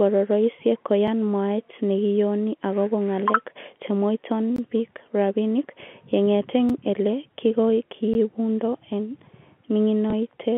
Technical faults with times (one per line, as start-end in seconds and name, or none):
1.07 block of digital silence
4.56-4.58 block of digital silence
6.69 block of digital silence
8.14 block of digital silence
10.10 packet loss with last packet repeated